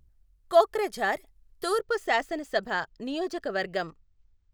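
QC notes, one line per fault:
1.80 s to the end: channel delay (comb filtering). One channel runs late by a tiny fraction of a millisecond, which fits a two-sample delay. Summed to mono, the shared speech cancels around 10 kHz. The top end turns dull.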